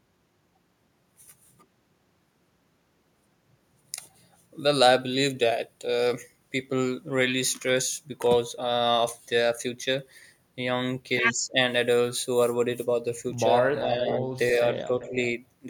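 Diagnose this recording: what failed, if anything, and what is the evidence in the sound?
Call processing: an echo leak puts a discrete copy of the speech 390 ms late, roughly 10 to 15 dB down, at 13.79–14.05 s and 15.0–15.15 s. This is likely a far-end canceller missing loudspeaker pickup; unlike room reverb, there is no diffuse tail.

Call processing: speech suppressed in double talk appears at 15.09–15.14 s as a shallow dip of about 5 dB lasting some 50 ms, during the overlap, not a full dropout to silence.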